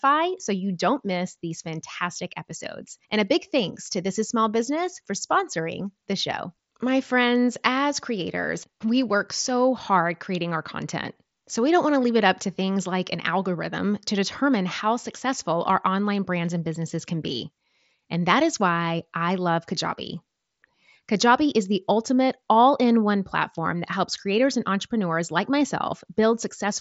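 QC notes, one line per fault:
24.50–24.54 s, wireless microphone noise hit: the FM radio link fades for 37 ms, so receiver noise surges into a brief static swish after "one platform that helps".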